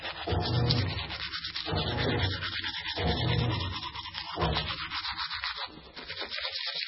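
Throughout the clip the treble stops abruptly at about 5.6 kHz, and the remaining sound is watery and swirly, with weak detail flickering in and out and attacks smeared. This is likely heavy MP3 compression at a very low bitrate, around 16 kbps.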